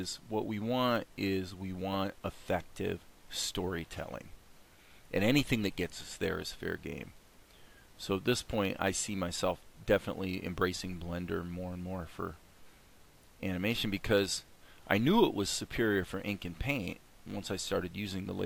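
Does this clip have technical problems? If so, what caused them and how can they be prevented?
Yes, there's crude rate conversion running the whole way through: a gritty, inharmonic fizz riding on the louder, brighter parts, sitting roughly 20 dB down. It sounds like samples were simply repeated rather than filtered, which fits a 32 kHz source pushed up to 48 kHz. Next time, run it through a proper band-limited resampler instead.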